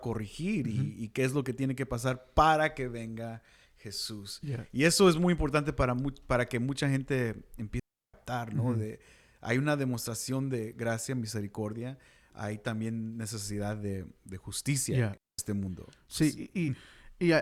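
At 7.80 s the speech cuts out for about 0.34 s, returning at 8.14 s. At 15.17 s it happens again, this time for about 0.21 s, ending at 15.39 s. Both are digital wireless dropouts. The radio link lost too much data to rebuild the audio, so the receiver muted rather than play corrupted sound. Each gap is a clean hole of near silence. The fade in and out is very short. No noise burst comes before or after.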